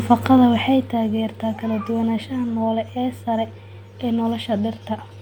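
From 0.34 s to 1.04 s the speech carries zipper noise: a level reduction of roughly 10 dB is applied in discrete 1 dB steps, with no smoothing between them, at around fifteen steps per second. Each abrupt gain jump puts a small discontinuity in the waveform, so the fade is heard as a fine ticking or zipping riding on the speech.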